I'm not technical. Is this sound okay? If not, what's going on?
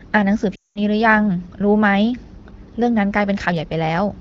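No. From 0.55 to 0.81 s the speech quickly drops to near silence, then returns weak or rough. This is lost AMR speech frames: radio errors corrupted a run of HD Voice data, so the phone repeated and faded the last good sound.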